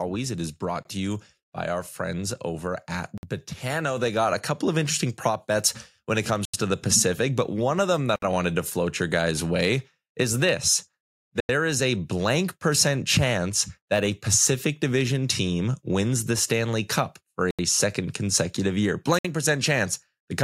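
The speech drops to silence at 0.83 s (about 21 ms), 3.18 s, 6.45 s, 8.16 s, 11.40 s, 17.51 s and 19.19 s, with gaps of 53 to 89 ms. These are likely Bluetooth stalls, where the headphone buffer ran dry. Unlike a lossy dropout, each resumes where it stopped or slightly later. At 3.97 s the microphone volume stepped up by about 5 dB in a single jump. Voice and background noise rise together and stay there, unlike a compressor or noise gate, which would move gradually or leave the background behind.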